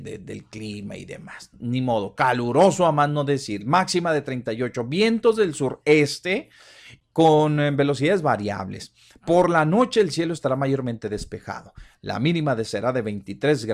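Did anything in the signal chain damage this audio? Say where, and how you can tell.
No, nothing in the signal chain damaged this speech audio.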